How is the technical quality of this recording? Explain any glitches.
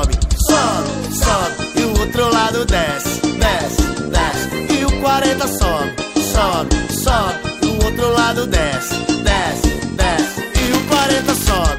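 The recording has one clear glitch, near the end. From 10.57 to 11.58 s there is buffer tearing. Playback and the hardware read point have slipped out of step. A small slice of each buffer repeats audio from a few milliseconds earlier, with hard joins. The result is a rattling 375 Hz buzz. That rate fits a 128-sample buffer.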